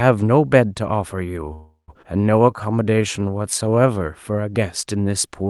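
At 1.53 s the speech halts for about 0.37 s in a call audio freeze. The last sound is stretched into a fading buzz that ends in roughly 110 ms of silence. Then the speech resumes exactly where it stopped. The likely cause is packets held up in transit, leaving the jitter buffer empty. Unlike a dropout or a skip, nothing is lost. About 347 ms of filler is inserted, and everything after it arrives that much later.

Shortly after, at 2.02 s, comes a skip ahead. Playback jumps forward with only an 11 ms join, so there is almost no audible gap, but roughly a fifth of a second of speech is gone. The sound on either side butts together abruptly. This is the opposite of the freeze: rather than a pause with nothing lost, there is no pause and something is lost. That suggests late or surplus audio was discarded to pull the delay back down.

From 2.42 to 4.00 s a jitter buffer slow-down stretches the speech to about 85% of normal speed. 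Single pitch periods and bits of pauses are repeated back to back, adding 240 ms overall. Sounds become drawn out while the pitch stays the same, which distinguishes it from a sample-rate error, where pitch would drop too. Through the Opus call path the audio's top end stops near 12 kHz.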